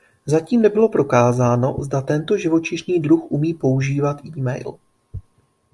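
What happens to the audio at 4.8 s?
Nothing goes wrong at 4.8 s: the speech continues intact through that moment, with no dropout, click or distortion to be heard.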